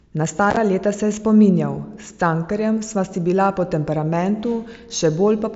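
From 0.51 to 0.57 s, unconcealed Bluetooth headset packet loss drops short packets, about 30 ms in all, cutting abrupt holes into the speech.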